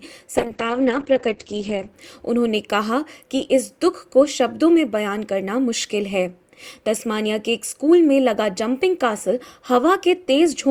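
From 0.41 s to 1.99 s there is a call bitrate drop. The encoder was starved of bits, which fits a fall from 48 kbps to 9 kbps. For 1.5 s, highs stop near 8 kHz, not 20 kHz. The sound turns coarse and muffled.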